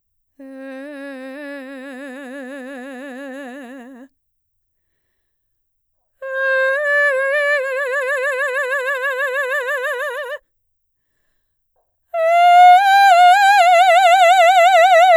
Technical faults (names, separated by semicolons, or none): none